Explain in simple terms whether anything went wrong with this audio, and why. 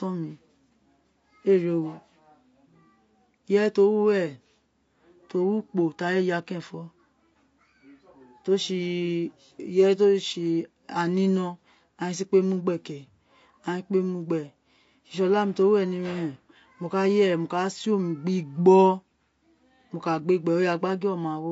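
Throughout the speech, the sound is rough and grainy, with a hiss between the pitched parts and a thin, artificial top end. The likely cause is low-delay AAC compression, whose very short frames capture a voice's pitch detail poorly and lose fine texture.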